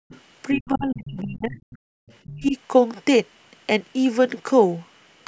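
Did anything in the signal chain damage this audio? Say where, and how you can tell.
Yes. Background gated by the echo canceller, 0.00 to 0.09 s and 1.89 to 1.98 s: the room sound drops by about 40 dB, then returns. At the call-processing stage, the echo canceller slammed the microphone gain down while its loudspeaker was playing, and released it afterwards.

Other side's voice leaking through, 0.09 to 0.20 s (about 30 dB under the speech), then 0.56 to 0.68 s, 1.04 to 1.11 s and 1.57 to 2.40 s (about 20 dB under): a faint second voice bleeds in, likely loudspeaker echo that the call's echo canceller failed to subtract fully.

Speech suppressed in double talk, 0.54 to 1.61 s and 2.26 to 2.56 s: the talker's speech dips by roughly 35 dB while the far-end voice overlaps. The echo canceller likely couldn't separate the two and attenuated both. The call's high-pass and the 8 kHz ceiling are normal.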